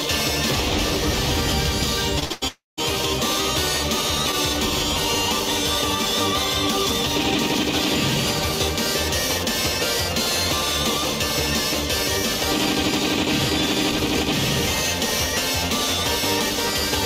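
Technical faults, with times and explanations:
2.19–2.24 s, short concealed packet loss: About 20 ms of audio never reached the decoder in time, so the receiver spent about 22 ms extending whatever was sounding just before, either from its pitch or as shaped noise, and then blended back into the real signal. The result is a brief smear or wobble right at 2.19 s.
2.24–2.32 s and 2.32–2.44 s, burst of packet loss: Two back-to-back runs of packets were lost or arrived too late to play, about 60 ms and then about 100 ms of audio. Each time the receiver kept the last sound going, about 64 ms and 96 ms of fill, while turning it down. This gives a held buzz or fading hiss in place of real audio, which jumps forward when playback resumes.
2.48–2.79 s, long network dropout: About 300 ms of audio fails to play, most likely because nothing arrived over the network for that stretch. The receiver first extends the last sound as a decaying buzz or hiss, then runs out of anything to continue, leaving about 170 ms of silence or low steady noise. 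When the audio returns near 2.79 s, it picks up further along, with the lost part simply absent.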